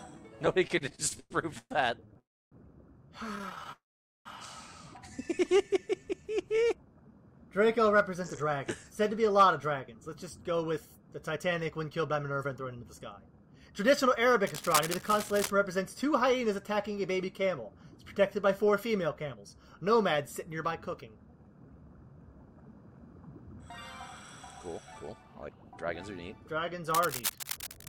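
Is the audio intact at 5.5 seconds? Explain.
No, not quite. From about 5.46 to 6.35 s there's a jitter buffer slow-down. The receiver's buffer was running short, so it padded things out by repeating single pitch periods and slivers of pauses, stretching the passage by about 107 ms. Playback drops to roughly 89% speed while the pitch stays put, so the sound feels drawn out and a touch sluggish, maybe with a faint warble.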